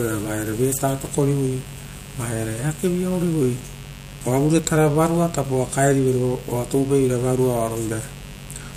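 Switching spikes from 50 Hz mains leak into the chain throughout, adding a steady, raspy mains buzz well below the speech, roughly 25 dB down.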